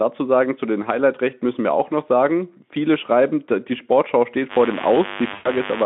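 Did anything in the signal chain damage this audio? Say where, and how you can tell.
Yes. From 4.48 s to the end, a steady, raspy buzz sits only about 10 dB below the speech. This mains buzz, built on 50 Hz with harmonics climbing high into the band, points to the analogue wiring: a dimmer, rectifier or unshielded lead injecting switching spikes twice per mains cycle.

From 5.33 s to 5.50 s the speech smears and fades, and stays weak just afterwards. This is VoIP packet loss concealed by the speech codec, a network fault. About 120 ms went missing, which fits six 20 ms frames, and the Speex decoder extrapolated its last pitch and filter while lowering the gain.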